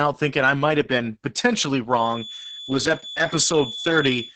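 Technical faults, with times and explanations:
throughout Opus voice compression: the speech was coded by the SILK voice coder at a rate near 10 kbps, cutting everything above 8.8 kHz and leaving it muffled, hoarse and slightly robotic.
1.88–4.35 s feedback whistle: likely a speaker-to-microphone loop held at the feedback point after "might have been potentially", sustaining a thin, slowly swelling and fading 3.4 kHz tone well below the speech.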